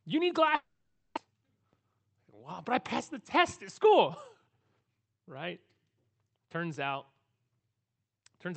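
At 0.55 s the sound smears into a fading buzz, then about 40 ms of silence until 1.19 s. That's likely a long network dropout, with roughly 400 ms of audio never played. From 1.82 to 4.09 s, and again from 4.49 to 5.07 s, there's a jitter buffer speed-up. The receiver trims pitch-period slivers, around 0.15 s in total, to shed the built-up delay. The speech runs about 4% and then 8% fast at unchanged pitch, sounding hurried in the second, over the Opus call path's 8 kHz band.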